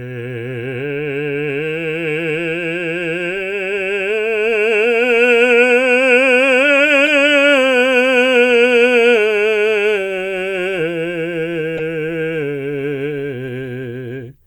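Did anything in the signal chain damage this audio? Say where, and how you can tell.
Yes. The codec stage damaged this music with a corrupt frame decoded three times. There is a faint blip at 3.50 s, a loud burst at 7.06 s, and a strong chirp from 11.77 to 11.81 s. Flipped bits led the decoder to misplace energy in frequency.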